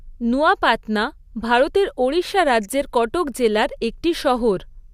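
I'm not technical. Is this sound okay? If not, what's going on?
Yes, no technical faults can be heard anywhere in this recording.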